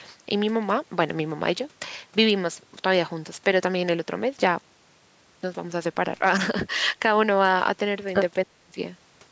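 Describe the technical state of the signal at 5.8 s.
At 5.8 s the speech is intact, with no fault present, only the normal call microphone processing that trims the lowest bass and leaves nothing above 8 kHz.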